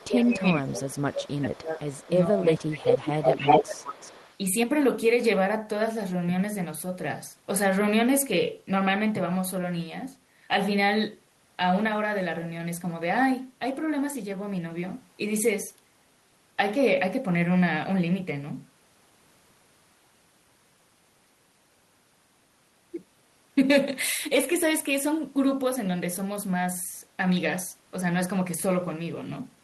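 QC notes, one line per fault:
0.0–0.07, 0.65–0.72, 1.77–2.1 and 2.57–4.37 s, echo leak: a delayed copy of the speech returns about 436 ms late, then about 369 ms late in the last stretch, where it rises to about 5 dB above the speech. It is a separate repeat rather than a smeared tail, likely from a loudspeaker that the far end's echo canceller failed to cancel.
0.07–3.73 s, speech suppressed in double talk: the speech dips by as much as about 20 dB in pieces totalling around two seconds. This is likely because the canceller could not separate the talker from the loudspeaker echo and turned both down.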